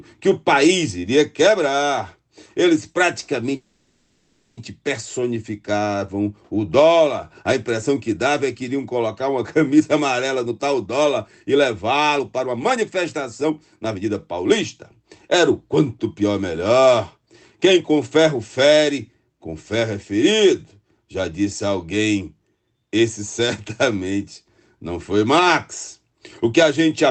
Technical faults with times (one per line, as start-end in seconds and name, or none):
3.55-4.59 call audio freeze
9.79-12.99 jitter buffer speed-up
13.43-17.27 jitter buffer speed-up